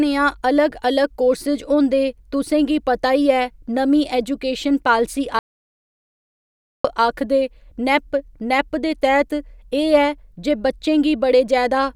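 A speech clip with an audio dropout to silence from 5.39 s to 6.85 s, right after "नमीं ऐजूकेशन पालिसी". For about 1.46 s the sound stops dead and the gap is silent, with no room tone or hiss at all. That total absence of background is what separates it from a pause in the speech or a noise gate closing. The likely cause is lost input, such as a dropped link or a mute, while recording carried on, so whatever was said in that stretch is gone.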